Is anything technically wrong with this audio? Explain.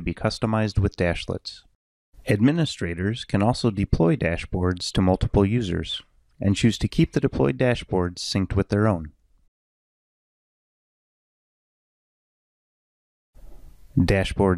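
Yes. Clock slip clicks run from 0.10 s to 14.54 s. The likely cause is two devices each running on its own clock with nothing to synchronise them, drifting apart by something like 400 ppm, so a single sample is dropped or repeated whenever the gap reaches a whole sample. That happens roughly every 70 ms, about a couple of hundred slips in all, heard as a fast, steady faint ticking or soft rattle that stands out most on loud, high or sustained sound.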